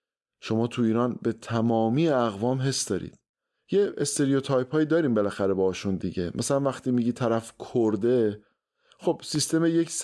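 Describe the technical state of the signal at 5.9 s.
At 5.9 s the signal is intact, with no audible fault in the speech at that moment.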